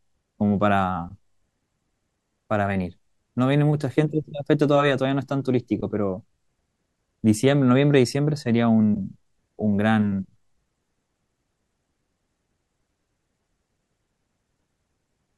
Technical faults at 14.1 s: none

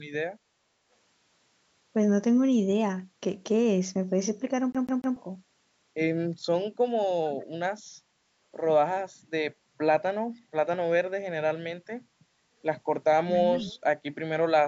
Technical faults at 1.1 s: none

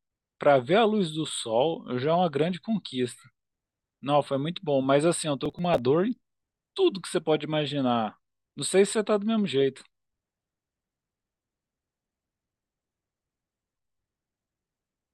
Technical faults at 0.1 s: none

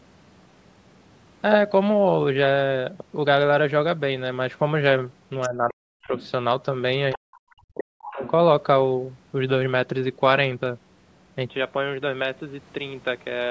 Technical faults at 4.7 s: none

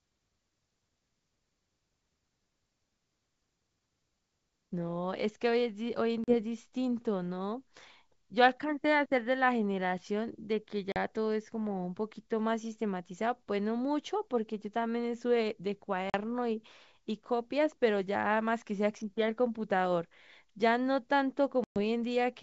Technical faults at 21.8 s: packet loss on an ADPCM call

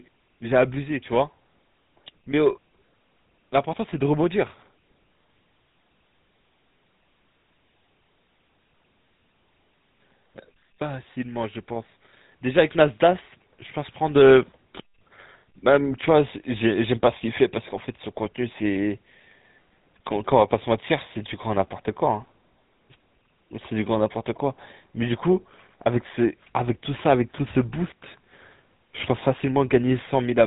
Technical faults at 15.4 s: GSM full-rate codec

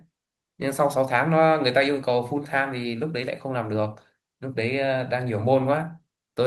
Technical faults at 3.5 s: none

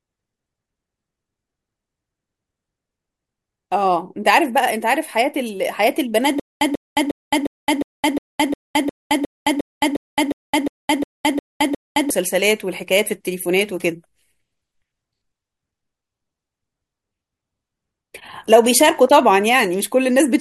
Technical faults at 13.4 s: none

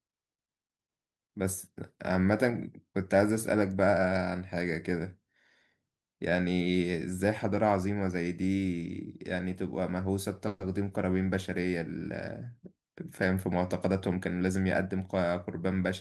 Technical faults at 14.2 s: jitter buffer speed-up

